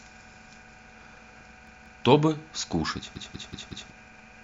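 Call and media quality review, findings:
Repeated buffer, speech stutters at 1.67–2.04 s (two extra plays) and 3.16–3.90 s (four), each about 186 ms chunk with hard joins, fits an 8192-sample playback buffer starving. Roughly 0.4 s and 0.7 s lost.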